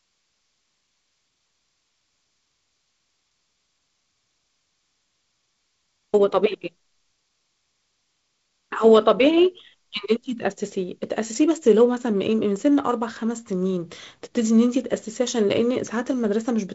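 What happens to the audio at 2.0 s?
Nothing goes wrong at 2.0 s: the speech there is intact, carried through wideband G.722 telephone coding, with its light upper-band hiss and nothing above about 7.7 kHz.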